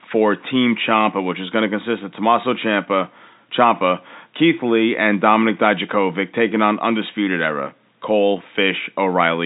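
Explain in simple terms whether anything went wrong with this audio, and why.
Nothing went wrong with this speech recording. It has the narrow, slightly muffled sound of an ordinary landline call because it went through standard telephone coding, which carries nothing above about 3.8 kHz.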